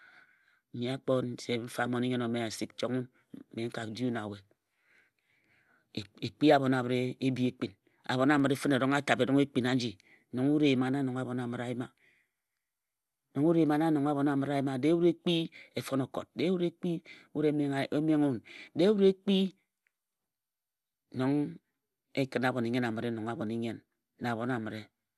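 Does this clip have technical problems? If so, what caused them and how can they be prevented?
Yes. Throughout the speech there is a dull, gurgling, granular quality with plainly audible codec damage, likely from MP2 compression at a starved rate that fits about 80 kbps. With too few bits, the upper sub-bands flicker on and off and the remaining bands are coarsely quantised. A spectrogram shows nothing above 12.1 kHz and patchy, blocky energy beneath that ceiling. Encoding at a higher bitrate or with a more efficient codec would prevent it.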